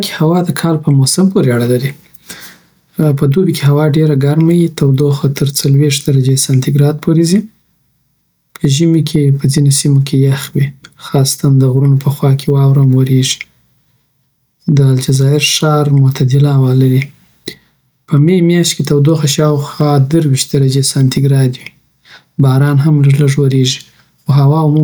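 Speech with gain pumping throughout: the level ducks by around 5 dB under each loud syllable, unlike a noise gate's abrupt cut, likely from excessive input gain driving a fast limiter.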